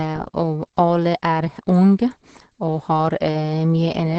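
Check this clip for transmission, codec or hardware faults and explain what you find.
The speech carries one fault, present from start to finish: Opus voice compression, heavily degraded. The linear-prediction coder here codes the excitation coarsely, consistent with a rate near 10 kbps, leaving the voice muffled, hoarse and faintly robotic. A spectrogram shows a hard ceiling at about 8.3 kHz, pointing to wideband mode, with smeared, blocky harmonics.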